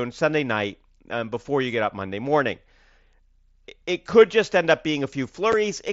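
At 5.52 s the speech has a tiny hole, about 7.5 ms long, with abrupt edges. This is unconcealed Bluetooth headset packet loss: a voice packet between headset and phone went missing, and nothing was done to hide the gap, so silence or an idle pattern filled it. Its length fits a single lost frame on the link, which here carries the mSBC headset codec with its 8 kHz upper limit.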